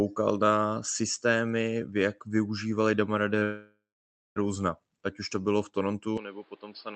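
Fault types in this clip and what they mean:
Short stall from a late packet: at 3.39 s a late packet empties the jitter buffer, and the last sound is held about 19 ms longer before resuming unchanged.
Call audio freeze: from 3.43 s to 4.38 s the audio halts for roughly 0.93 s, likely from packets held up in transit, fading into about 0.57 s of silence, then resuming where it stopped.
Input switched to a poorer device: from 6.18 s to the end the sound turns duller, nothing above 5.2 kHz, about 10 dB quieter, with added noise roughly 30 dB down, likely a change of microphone.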